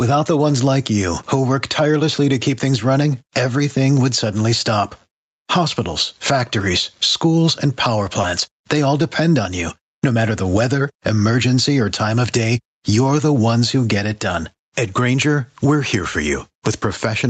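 Throughout the speech, gain pumping is audible, with a swing of roughly 15 dB. The likely cause is a gain set far too high feeding a fast limiter. On the waveform, loud and soft passages sit squashed toward one level.

Right after "factories schools and power", a short concealed packet loss runs from 8.21 to 8.25 s. About 20 ms of audio never arrived, and the decoder extended the preceding sound to cover the hole before blending back in. It is heard as a brief smear. A spectrogram shows a short stretch of smoothed, repeated harmonics or shapeless noise.

Overlapping and following that, lost packets rebuilt from error correction occur at 8.23, 8.27 and 8.31 s. Each 20 ms frame was replaced by the low-bitrate copy carried in the next Opus packet, so nothing drops out. These frames sound briefly rougher and grainier. On a spectrogram they appear as thin slices with blurrier, noisier detail.

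A second concealed loss follows from 8.57 to 8.63 s, covering about 40 ms. It gives a longer smear or wobble, and a brief consonant may vanish. It shows as a smoothed band where fine spectral texture disappears.

Further error-corrected frames come at 8.75, 8.83 and 8.99 s, each 20 ms. Each gives the same momentary coarsening, visible as a narrow, noisier vertical strip. Throughout, the 64 kbps Opus call path limits content to 8 kHz, which the spectrogram shows as a flat ceiling.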